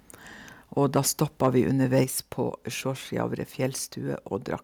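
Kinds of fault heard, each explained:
Microphone overload: at 0.95 to 0.99 s, 1.44 to 1.6 s and 1.96 to 2.02 s, the loudest peaks turn harsh and crackly, overshooting the ceiling by about 1 to 2 dB. The likely cause is input gain set too high, so the converter flattens their tops.
Microphone volume stepped down: at 2.04 s, right after the last distorted peak, the speech and background drop together by about 5 dB in a single step. This is likely the call software reacting to the clipping by cutting the device's input volume at once.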